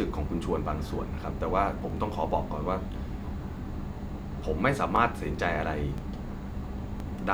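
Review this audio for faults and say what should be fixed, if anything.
Overlapping chunks: the speech was handled in 1-second chunks, each starting 20 ms before the previous one ended, so 20 ms replays at every join. This produces a regular stutter-click at 0.88, 1.90, 2.92, 3.94, 4.96, 5.98 and 7.00 s. To prevent it, advance each chunk by exactly its own length, or crossfade and trim any intentional overlap so no audio plays twice.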